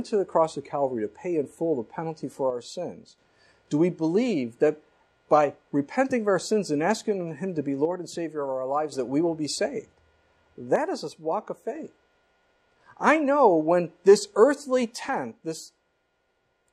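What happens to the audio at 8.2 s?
At 8.2 s the audio sits inside a one-channel dropout running from 7.85 to 8.92 s: the level falls abruptly by about 6 dB, most likely because one stereo channel went missing before the mono sum. Unlike a fade, both edges are instant steps.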